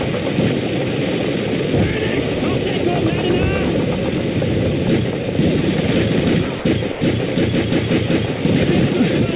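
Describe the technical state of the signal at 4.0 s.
At 4.0 s the audio is intact, carrying only the narrowband character of the call path, whose G.711 mu-law coding leaves nothing above about 4 kHz.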